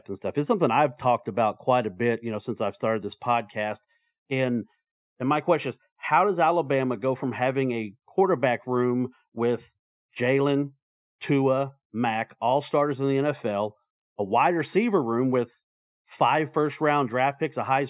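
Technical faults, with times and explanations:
No technical faults are audible in this speech recording.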